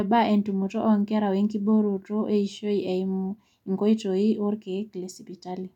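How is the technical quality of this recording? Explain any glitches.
No audible glitches or technical faults anywhere in the recording, so there is nothing to explain.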